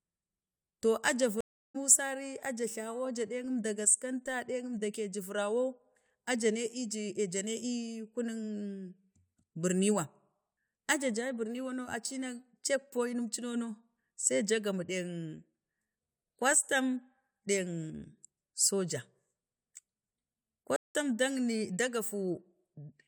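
At 1.41 s the speech drops to silence for about 0.34 s and picks up roughly 0.4 s further on; at 20.76 s a 0.18 s gap skips about 0.15 s. Both are stream reconnects: the connection broke and a fresh decoder resumed mid-stream.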